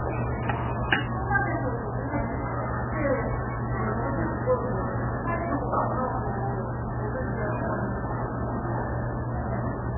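From start to finish the sound has nothing above 3 kHz and a heavy watery, swirly texture, likely from MP3 compression at a very low bitrate, somewhere around 8 kbps. Starved of bits, the encoder chopped the treble and kept dropping weak frequency lines in and out between frames.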